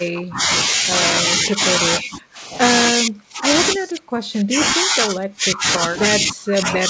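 A speech clip over a call path with nothing above 8 kHz, which fits a G.722 wideband codec. The speech dips at 0.0–0.5, 1.54–1.61, 2.02–2.39, 2.91–3.48 and from 3.77 s to the end, dropping about 10 to 35 dB. That's likely speech suppressed in double talk, with the echo canceller ducking the talker while the far end speaks.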